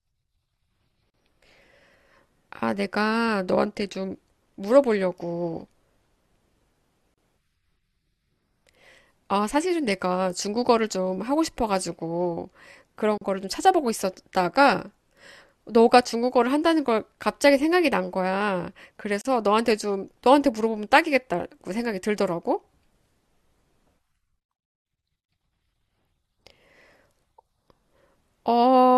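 At 1.10 to 1.14, 7.14 to 7.18, 13.18 to 13.21, 19.21 to 19.25 and 25.25 to 25.29 s the speech drops out for about 37 ms, every 6 s. Each is a gap at a join of encoded pieces, where the separately encoded chunks kept their padding, so the sound stops abruptly, with smeared edges, then carries on.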